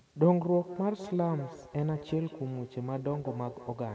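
From 0.53 s to the end, feedback echo between two devices: a second device replays this speech into the microphone, returning thinner, ringing copies roughly every fifth of a second, peaking about 14 dB below the speech.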